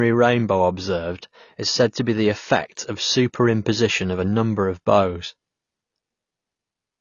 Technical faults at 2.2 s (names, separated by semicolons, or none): AAC compression